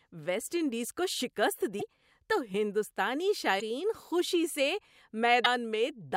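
A likely broken MP3 bit reservoir: frames seem to have been dropped, so each following frame reaches back for borrowed data and decodes bytes belonging to another frame. The speech jumps forward with a brief glitch of about 0.03 s at 1.79 s after "ویسٹ انڈیز کو شکست", at 3.59 s after "تو ہندوستانی" and just before "خوشی سے", and again at 5.44 s.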